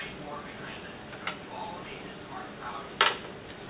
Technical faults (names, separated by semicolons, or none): none